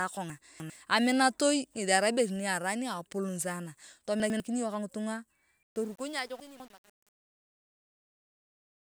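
At 0.3 to 0.7 s, just before "aminatoi ngethi", the speech jumbles briefly: chunks out of order. A 100 ms chunk plays three chunks late, so the sounds are shuffled and meet at three hard joins. The same happens at 4.2 to 4.4 s with one chunk displaced, and at 6.4 to 6.7 s with a chunk two places late. Unlike a dropout, nothing is missing and nothing is replaced by silence. The sound is all there but in the wrong order.

From 5.63 s, right after "ka ngitunga", the fade-out carries truncation distortion on a fade. The level stage keeps too few bits and adds no dither, which fits an 8-bit stage, so the waveform collapses into coarse steps as it gets quieter. From 5.67 s to the end at 8.81 s the tail turns gritty. Steady background noise would stay the same as the level falls, but this roughness gets worse the quieter the fade gets.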